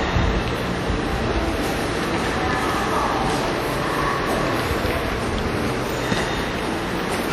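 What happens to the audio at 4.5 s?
At 4.5 s the sound carries the same plainly audible damage that runs through the whole clip, most likely WMA compression at a bitrate around 48 kbps. The transform smears quantisation noise across tens of milliseconds and drops weaker spectral lines, giving a ringing, washy texture with hiss that swells and fades with the signal. Because this smearing is continuous rather than a momentary gap or click, it points to compression, not packet loss.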